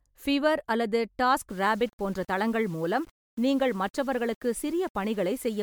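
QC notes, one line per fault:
Throughout, generation loss: the speech has likely passed through MP3 at 128 kbit/s about three times, each pass requantising on a shifted frame grid, so coding noise and spectral holes accumulate into a swirly, hollow smear with blurred consonant attacks, despite content reaching 20.1 kHz.
1.50 to 5.62 s, low bit depth without dither: after "பிவர் அல்லது" the signal is likely rounded to 7 bits with no dither, leaving error that tracks the speech at about 30 dB below it, so quiet passages turn gritty and sputter between adjacent steps.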